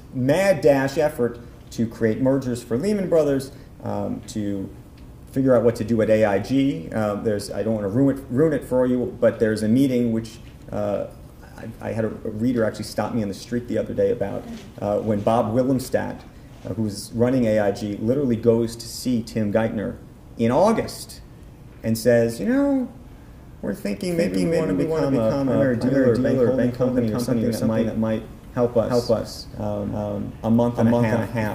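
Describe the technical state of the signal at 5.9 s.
At 5.9 s the signal is intact, with no audible dropout, distortion, glitch or other technical fault at that point.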